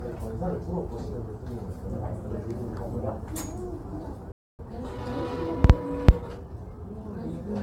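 From the start, the everyday sound is swirly, hollow and smeared, with blurred attacks. This generation loss likely comes from roughly ten AAC-LC re-encodes, which fits 96 kbit/s passes.

At 4.32 s a playback stall cuts the sound to silence for about 0.27 s. The player likely ran dry or was blocked.

From 4.59 to 7.27 s comes time-compressed catch-up. Small pieces are cut and cross-faded, so the sound hurries at 1.1 times speed.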